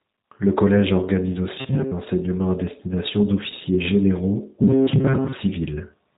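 Across the whole clip the speech carries the sound of the G.729 codec, in its G.729A form. The codec does not store the waveform. It resynthesises each 10 ms frame from a vocal tract filter, a pitch predictor and a handful of pulses, and the result is plainly audible here as a rough, slightly synthetic texture. Nothing above about 3.8 kHz survives, which fits a narrowband 8 kbit/s VoIP link.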